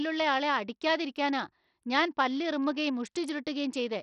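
Speech runs with heavy Bluetooth SBC compression damage throughout: nothing reaches above 16.9 kHz, the upper treble flickers in and out, and a gritty quantisation noise with aliasing rides on the sound. A starved bit pool, likely near 64 kbps, leaves the top sub-bands with almost no bits.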